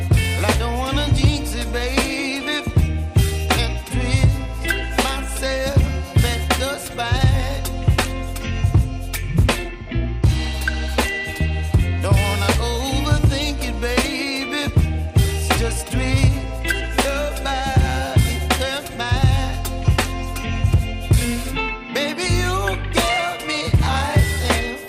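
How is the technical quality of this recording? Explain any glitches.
The technical quality is compromised throughout by plainly audible MP2 compression artefacts. From start to finish the sound is dull and carries a gurgling, granular roughness, which fits a rate around 80 kbps. The likely cause is MPEG Layer II coding starved of bits: its 32 sub-bands compete for too small a budget, so upper bands drop out and flicker back while the surviving ones are coarsely quantised. On a spectrogram the top end shows blocky, intermittent patches and abrupt horizontal cut-offs instead of smooth decay.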